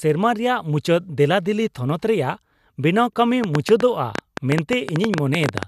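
From 3.44 s to 5.64 s a train of clicks runs over the speech: about twenty sharp pulses of much the same shape, averaging 9.1 per second but spaced unevenly, and standing out at their loudest by something like 20 dB above the speech. The likely cause is interference from nearby equipment or a faulty connection or power supply injecting pulses. Unlike crackle, which is random clicks of varied size, these repeat with a near-identical shape.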